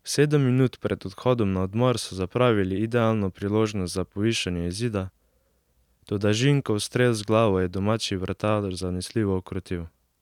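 No technical faults are audible.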